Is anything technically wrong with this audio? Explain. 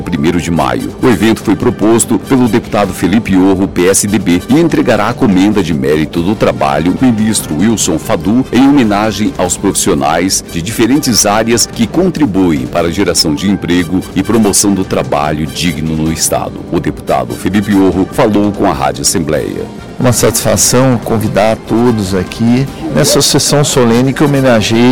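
Yes. Hard clipping runs through the whole clip. The signal reaches the converter or processing stage about 15 dB hotter than it can pass, so around a tenth of all samples are forced against the ceiling and the waveform peaks are sliced flat. Those squared-off tops generate harmonics well above the original content. With an overload this large, the result is not occasional crackle but a constant harsh fuzz on every loud passage.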